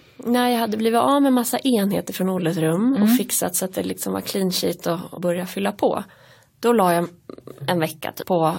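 Whole compressed frames were skipped by the decoder, each 23.2 ms long. At 5.17–5.19 s, between "var clean sheet och" and "fylla på", the gap suggests around seven frames, roughly 200 ms of lost audio. At 8.21–8.23 s, about 300 ms is gone, which points to around ten frames. Each time the speech jumps forward.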